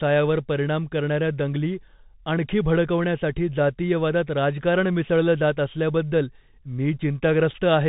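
From start to finish the speech runs through a Bluetooth CVSD headset codec, so nothing gets past about 3.8 kHz and it sounds boxy and phone-like. The one-bit up/down coding, which fits a 64 kbps link, can't keep pace with loud high sounds, so s sounds come out scratchy, with a grainy hiss under everything.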